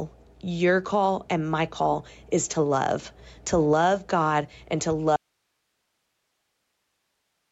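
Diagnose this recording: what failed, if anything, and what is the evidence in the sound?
Gain pumping runs through the whole speech clip. The gain swings by about 5 dB. The likely cause is input gain set too high, with a fast limiter pulling it down.

An audio dropout to a faint residue begins at 5.16 s, right after "and to", and lasts to the end. Only hiss remains, about 50 dB down. The signal was likely lost upstream while the rest of the chain stayed live.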